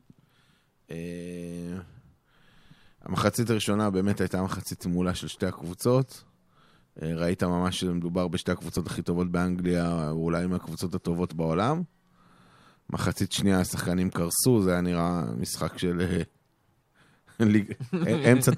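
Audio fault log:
8.77 s, overlap between stream segments: a single tiny click or skip in the speech, where a sliver of sound goes missing and the waveform jumps abruptly instead of continuing smoothly. The audio arrives in 4 s segments, and at this join the time stamps of two neighbouring segments overlapped. The player treated the overlapping span as duplicated and trimmed it, but that sound was never really repeated, so a few milliseconds were simply cut out.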